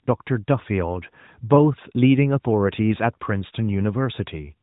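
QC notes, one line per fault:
Nothing stood out on listening to this speech clip.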